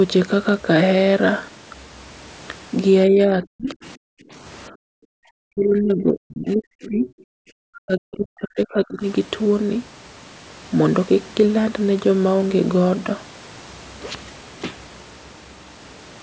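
From 3.09 to 4.0 s the talker's speech dips and breaks up, with around 0.7 s of it pulled down by as much as roughly 40 dB. This is speech suppressed in double talk. Both ends were likely talking at once, and the echo canceller, unable to tell the near talker from loudspeaker echo, attenuated everything on the microphone path.

Inside that stretch, from 3.43 to 3.47 s, a brief scrap of a second voice comes through, around 30 dB below the talker. This is the other side's voice leaking through. The far-end audio played on the device's loudspeaker likely reached the microphone, and the canceller left this fragment of it behind. It is short and faint.

At 4.69 to 4.77 s there is another short double-talk dip of roughly 15 dB lasting about 70 ms.

From 5.05 to 5.2 s the room background drops by about 40 dB for roughly 150 ms, then returns. This is background gated by the echo canceller. While the loudspeaker was active the canceller clamped the microphone down hard, so the ambient noise briefly vanishes and comes back when it releases.

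The longest event runs from 5.48 to 9.03 s, with speech suppressed in double talk for around 3 s in total and the deepest cuts reaching roughly 40 dB. The clip carries nothing above 8 kHz, consistent with call microphone processing.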